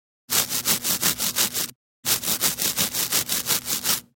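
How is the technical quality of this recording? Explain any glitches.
There is one glitch, a skip in the audio. Compressed frames skipped at 1.69 s: several whole frames, which sound like about 26.1 ms each, never reach the output, so the sound leaps forward roughly 0.3 s, pointing to around ten lost frames.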